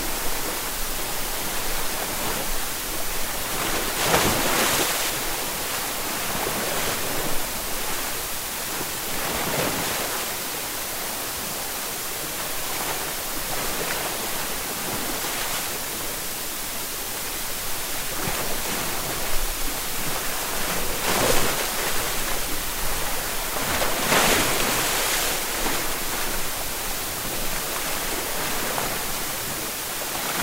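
A USB whine runs through the whole recording. It is a fixed-pitch tone built on 1 kHz, the rate of the USB bus's 1 ms frames. Current drawn by the bus in those frames leaks into the audio through the shared power or ground. The energy is not confined to the fundamental. The strongest component sits high, at 18 kHz, a multiple of the frame rate. The whine lies roughly 35 dB below the wanted sound.

Low bit depth with dither is also present from start to finish. The audio has been reduced to very few bits, which fits a 4-bit word length. Dither was added before rounding, so the coarse steps do not turn into distortion. Instead the rounding error becomes a steady white hiss. It is loud, sitting only about 5 dB under the sound itself. It stays constant and even throughout.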